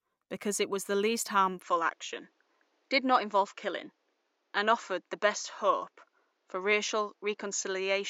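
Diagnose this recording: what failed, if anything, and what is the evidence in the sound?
At 1.62 s, right after "it was the least", the speech goes duller and stays that way: nothing above 7.6 kHz from there on, with a new, faint noise floor about 45 dB down. No gap, no level jump. That likely points to an input switched to a poorer device at the input stage.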